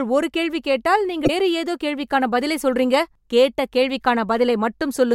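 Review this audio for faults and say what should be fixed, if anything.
Damaged data in a compressed stream shows up from 1.24 to 1.30 s, right after "ஒரு கேள்வி கேட்டால்": a brief glitch of about 56 ms. Corrupted bytes there made the decoder misread those frames, lose sync and hunt for the next valid frame header. Fix it by re-encoding from a clean source and verifying file integrity with checksums during transfer.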